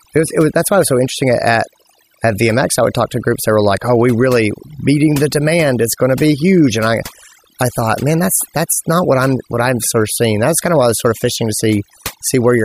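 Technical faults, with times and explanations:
Throughout, overdone noise removal: lowered background with twinkling specks, because an over-strong noise reducer cut bands near the noise level.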